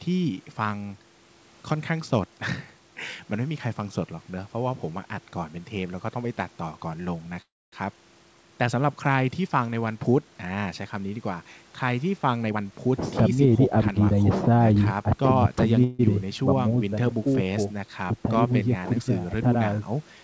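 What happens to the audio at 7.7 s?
A call audio freeze runs from 7.42 to 7.74 s: the audio holds as a brief fading buzz, falls silent for about 0.25 s, then resumes intact. Delayed packets likely emptied the jitter buffer.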